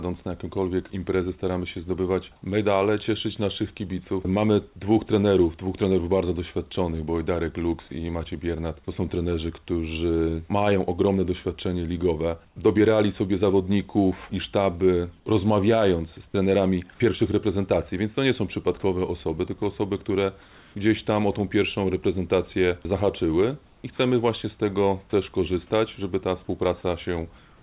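At 12.47 to 12.56 s, 20.42 to 20.75 s, 23.66 to 23.84 s and 27.38 to 27.62 s, the real background gives way to comfort noise. The texture turns steady and featureless, with the level dropping about 6 dB, 1 dB, 4 dB and not at all. The likely cause is discontinuous transmission, where the receiver synthesises noise while the sender is silent.

At 16.32 s the onset is clipped by the voice detector. About 20 ms is missing, so the sound starts abruptly, likely because the detector reacted late and comfort noise filled the gap.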